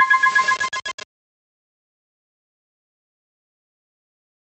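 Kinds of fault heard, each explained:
Gain pumping: the level keeps swinging by around 5 dB, so loud and soft parts sit squashed close together, most likely from input gain set too high with a fast limiter clamping it.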